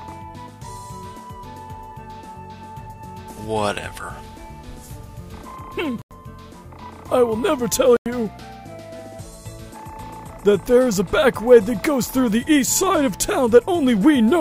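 At 6.02 s the audio drops into dead silence for about 0.1 s, then again from 7.87 to 8.06 s for nearly 0.2 s. That's corrupt frame muted: damaged compressed frames got rejected by the decoder and the player filled the gap with silence, so each hole cuts in abruptly while the timing stays intact.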